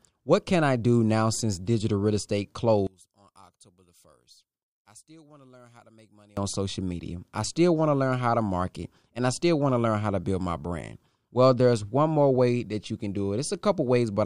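From 2.87 s to 6.37 s the speech nearly vanishes, dropping by about 28 dB and leaving only a faint trace. The likely cause is one channel inverted: with one stereo side's polarity reversed, the centred voice cancels when both channels are summed to mono.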